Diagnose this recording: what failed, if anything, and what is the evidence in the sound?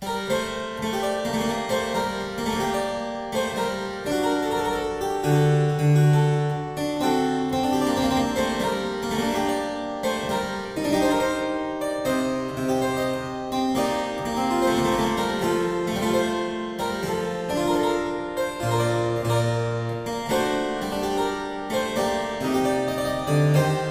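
Nothing failed; no faults found.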